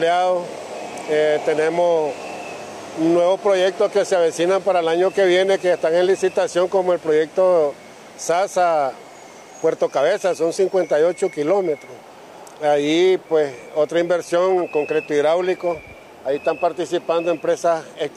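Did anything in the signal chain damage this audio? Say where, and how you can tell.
No, nothing in the chain audibly damaged this audio, and no stage from capture through playback leaves a mark that can be heard.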